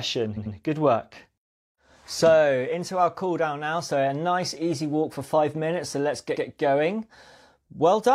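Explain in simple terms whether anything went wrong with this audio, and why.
Something went wrong near the start, between 0.33 and 0.51 seconds. This is a fault called repeated frames. Compressed audio is stored in small chunks. Here a run of two chunks, about 93 ms long in total, was saved or sent more than once. The player played it two extra times in a row. You hear a quick stutter, like the speech catching on itself. This adds about 0.19 seconds to the clip.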